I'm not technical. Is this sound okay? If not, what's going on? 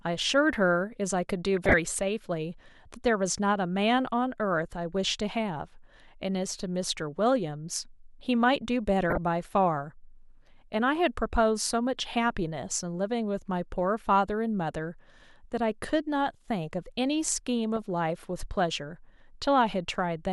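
No. At 1.57 to 1.74 s, 9.10 to 9.18 s and 17.76 to 17.82 s you hear DAB burbling. This happens when weak digital radio reception lets errors into the audio. Bits of the speech briefly break into short blips of noise.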